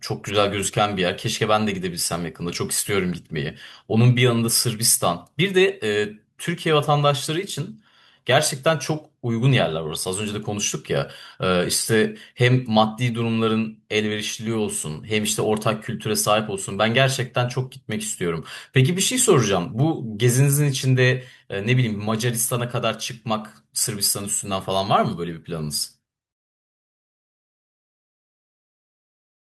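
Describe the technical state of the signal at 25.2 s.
At 25.2 s the speech signal is intact, with no audible technical fault at that moment.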